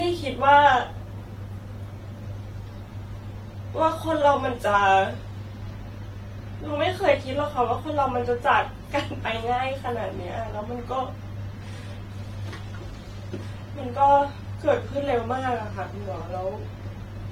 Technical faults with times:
0.00-17.31 generation loss

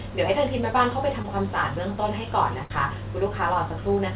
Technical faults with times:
1.22-1.26 short concealed packet loss
2.64-2.72 burst of packet loss

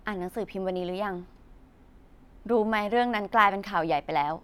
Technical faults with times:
none

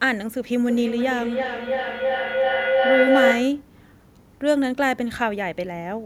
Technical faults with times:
0.60-3.73 feedback howl

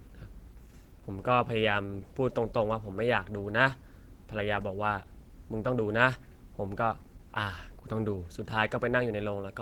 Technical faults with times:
0.00-9.62 Opus compression

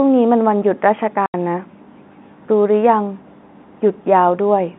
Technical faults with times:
1.26-1.34 packet loss filled with silence

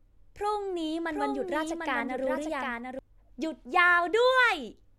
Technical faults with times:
1.11-2.99 doubled audio track

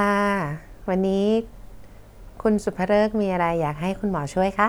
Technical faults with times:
none

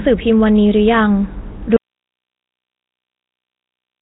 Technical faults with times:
0.00-4.01 Nellymoser compression
1.76-4.01 audio dropout to silence

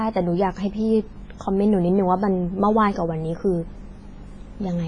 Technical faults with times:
0.00-4.87 WMA compression

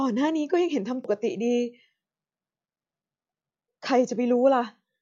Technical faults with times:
1.04 audio missing between chunks
3.29 audio missing between chunks

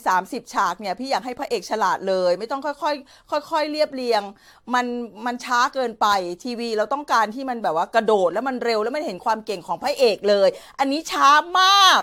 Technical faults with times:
0.00-12.02 generation loss

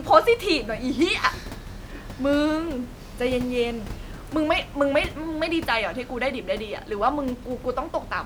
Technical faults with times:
none

